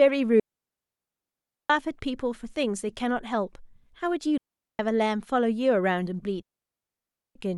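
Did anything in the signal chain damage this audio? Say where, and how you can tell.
Yes. The digital wireless link between transmitter and receiver is losing too much data, a digital wireless dropout, and the receiver responds by muting. The speech falls into clean holes of near silence from 0.40 to 1.70 s (1.3 s), 4.38 to 4.79 s (about 0.42 s) and 6.42 to 7.35 s (about 0.93 s). Each gap opens and closes with a very short fade and no noise burst on either side, which marks a deliberate receiver mute.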